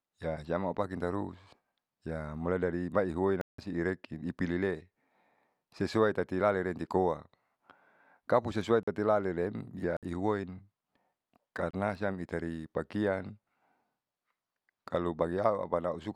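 The output buffer was probably not filled in time, leaving blocks of digital silence at 3.41 s (170 ms), 8.83 s (43 ms), 9.97 s (60 ms) and 11.71 s (26 ms). Each time the speech cuts abruptly to silence and back.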